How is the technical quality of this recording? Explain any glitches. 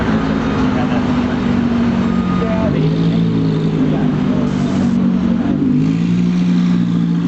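The recording has two audible problems: constant level pumping and a short burst of crackle.

Gain pumping runs through the whole clip. The level swings by about 20 dB, leaving everything squashed and flat in dynamics. The likely cause is input gain set far too high, with a fast limiter or compressor clamping down on each peak and releasing in between.

From 4.47 to 4.97 s there is a fizzing crackle that continues even where the sound itself is quiet. This comes from an unreliable data bit: one marginal data line flips its bit in a random share of samples, so each error becomes an identical spike, and together they form that steady granular crackle. The top end is limited to about 8 kHz, which fits the Opus call path the audio passed through.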